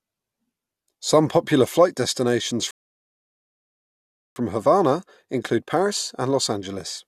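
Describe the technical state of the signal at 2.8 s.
At 2.8 s the audio has gone completely silent: right after "popular flight destinations" the speech halts at 2.71 s and nothing is heard until 4.36 s, when it picks up exactly where it left off. This is a rebuffering stall. The player exhausted its downloaded audio and paused until more data arrived, so no speech is lost, but about 1.65 s of dead air is inserted into the clip.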